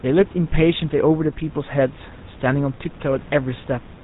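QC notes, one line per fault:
Throughout, GSM full-rate codec: the speech has that familiar buzzy, gravelly roughness, and nothing comes through above 4 kHz, so it sounds dull and boxed-in. The codec rebuilds the voice from a vocal-tract model fed by evenly spaced pulses, keeping only every third excitation sample, and that coarse excitation is where the grit comes from. The damage is plainly audible and fits a 13 kbps GSM stream. The room noise, about 21 dB under the speech, sits behind it.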